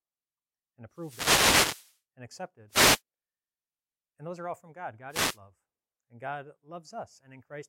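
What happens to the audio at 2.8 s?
At 2.8 s the speech is hit by a wireless microphone noise hit. It runs from about 2.69 s to 3.02 s, roughly a third of a second. The analogue FM radio link fades briefly as reflected signals cancel the direct one at the receiver. With the carrier that weak, receiver noise rises. It is heard as a short swish or burst of static that then clears.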